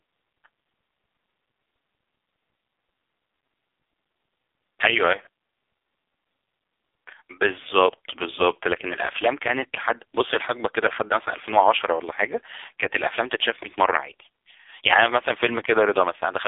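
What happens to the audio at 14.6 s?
At 14.6 s the speech is still in AMR narrowband mobile codec sound, which runs through the whole clip. The band sits between roughly 300 Hz and 3.6 kHz, and nothing passes above 3.7 kHz. The codec rebuilds the voice from a vocal-tract model fed by a few pulses per short block. Here the damage is heavy. The voice sounds buzzy, thin and synthetic, which points to one of the lowest AMR-NB modes, near 5 kbps.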